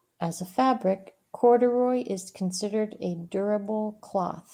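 No faults detected in this speech recording.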